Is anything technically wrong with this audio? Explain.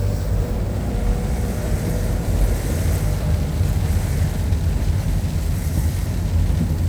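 No, nothing technically wrong can be heard here.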